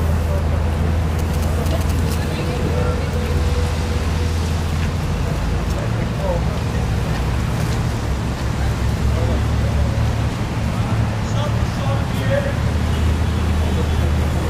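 From 1.19 to 2.15 s, GSM signalling bursts from a nearby 2G phone, rectified by the audio circuit, gallop in dit-dit-dit groups of 217 Hz buzz around 10 dB down. Steady mains hum never comes in groups like this.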